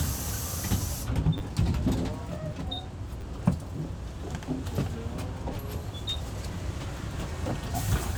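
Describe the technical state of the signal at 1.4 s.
At 1.4 s the signal is at the tail of a repeated buffer fault spanning 1.38 to 1.40 s. New audio did not reach the output in time, so the device replayed the last block instead of waiting. The same short segment is heard three times in a row, which fits a 10 ms buffer played twice more, with a hard join at each repeat. Because the block is so short, the result is a brief buzz or click, and roughly 20 ms of the original audio never plays.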